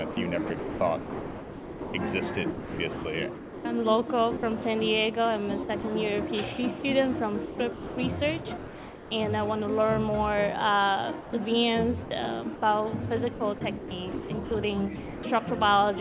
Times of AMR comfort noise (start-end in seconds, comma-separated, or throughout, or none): none